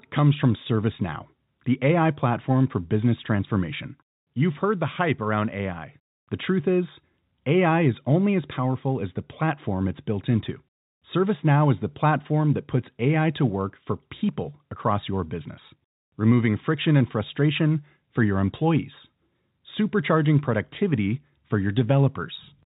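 No technical faults can be heard anywhere in the speech. It carries the narrow sound of G.711 telephone coding, with nothing above 4 kHz and at most a faint quantisation hiss that rises and falls with the level.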